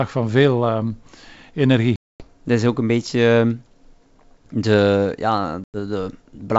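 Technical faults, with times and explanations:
1.96–2.24 s and 5.64–5.78 s, packet loss on an ADPCM call: the speech drops into abrupt, hard-edged silence, about 240 ms in the first gap and 100 ms in the second, fitting roughly ten and five lost packets. When sound resumes it comes back with slight distortion before settling. The missing data throws the G.722 decoder's adaptive predictor and step size out of step with the sender's, so it needs some tens of milliseconds to recover.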